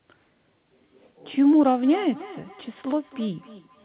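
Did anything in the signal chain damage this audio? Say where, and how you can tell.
Yes. Feedback echo between two devices, at the call-processing stage, from 1.83 s to the end: the sound returns roughly every 300 ms, peaking about 19 dB below the speech and thinner on each pass. A nearby device replays this microphone's signal, the microphone recaptures it, and neither echo canceller removes the other's playback.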